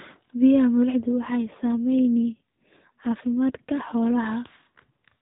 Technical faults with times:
1.16-4.27 AMR rate drop

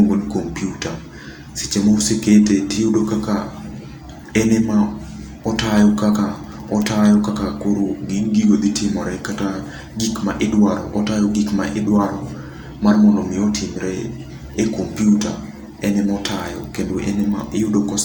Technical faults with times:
none

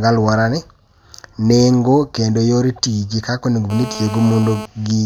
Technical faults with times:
3.70-4.66 GSM phone buzz

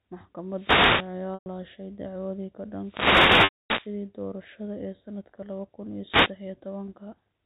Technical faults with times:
0.48-1.17 wireless microphone noise hit
1.34-1.46 packet loss with pitch repetition
2.80-3.96 wireless microphone noise hit
3.44-3.70 packet loss with pitch repetition
6.06-6.35 wireless microphone noise hit

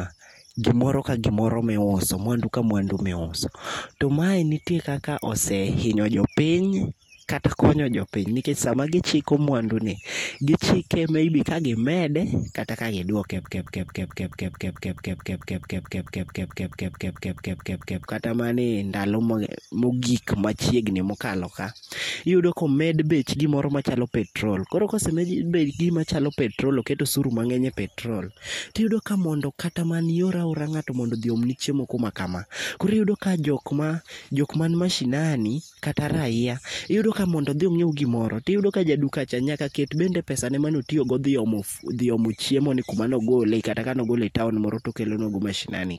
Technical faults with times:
13.45-18.06 broken-record loop

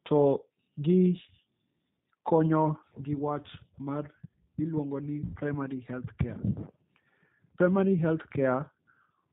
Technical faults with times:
0.00-9.33 G.729 codec
5.25-5.38 VoIP packet loss concealed by the speech codec

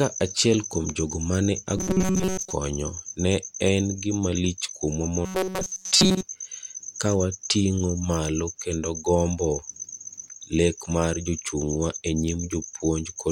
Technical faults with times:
1.77-2.53 robotic sound from repeated short buffers
5.26-6.22 robotic sound from repeated short buffers

